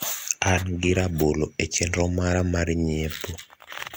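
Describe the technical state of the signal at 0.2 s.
At 0.2 s the speech signal is intact, with no audible fault at that point.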